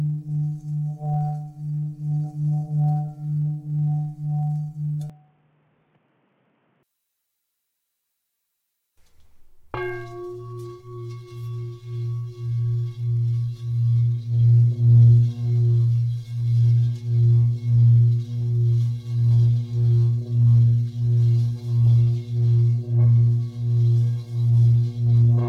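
Throughout, a block size mismatch (truncated) discards each block's tail, leaving a steady buzz near 92 Hz at the block rate, with speed and pitch staying essentially normal.

From 5.10 to 6.83 s, the sound turns dull, drops roughly 10 dB, and gains a faint new noise floor. This is likely an input switched to a poorer device. The joint change in level and noise, not just bandwidth, sets it apart from a simple filter.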